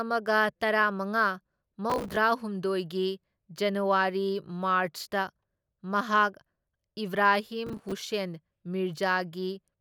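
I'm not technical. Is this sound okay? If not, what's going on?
No. This is processor overload crackle: the computer fell behind on tiny chunks of audio and replayed stale bits, causing gritty crackling around 1.9–2.17 s and 7.67–7.92 s.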